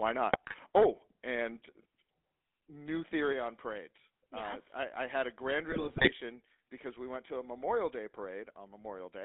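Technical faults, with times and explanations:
Throughout: GSM full-rate codec. The speech is band-limited to roughly 250 Hz to 3.7 kHz and carries a plainly audible buzzy, gravelly roughness. That comes from the coder rebuilding the voice from a vocal-tract filter driven by sparse, regularly spaced pulses, consistent with 13 kbps GSM full rate.
0.33–0.56 s and 5.70–6.13 s: GSM bit errors. The speech breaks into squawks, pops and gargling for these spans, the second one longer. Corrupted filter, pitch or gain parameters distort the spectrum or level frame by frame. The damage density suggests a bit-error rate of about 2 to 3 percent.
0.78 s and 3.33 s: microphone volume stepped down. Speech and background drop abruptly in level, by about 3 dB and then about 4 dB. A single-step fall like this is likely call software lowering the device's input volume after judging the microphone too loud.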